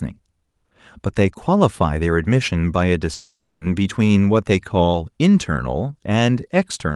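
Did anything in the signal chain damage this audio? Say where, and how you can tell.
Yes, at the network stage. From 3.13 to 3.63 s the speech stops being real: for most of that half-second you hear the last sound smeared into a fading buzz, then about 60 ms of near-silence before the audio picks up again further along, with that stretch simply gone. That's the signature of a long network dropout, likely packets that never arrived, with the receiver's concealment covering around 480 ms before giving up. The Opus call path, topping out near 12 kHz, plays through the rest.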